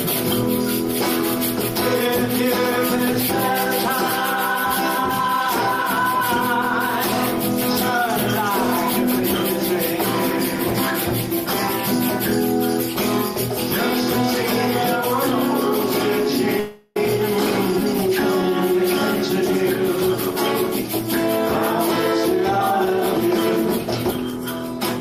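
A long network dropout likely stopped the incoming audio from 16.59 to 16.97 s, losing about 360 ms. The receiver filled the whole gap by stretching the last sound into a fading buzzy hiss that never reaches silence, then the audio resumes with that stretch missing.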